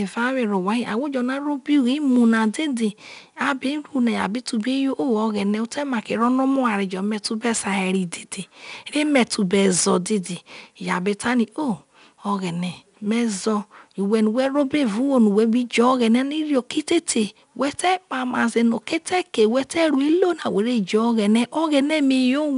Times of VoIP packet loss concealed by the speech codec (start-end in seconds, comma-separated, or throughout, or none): none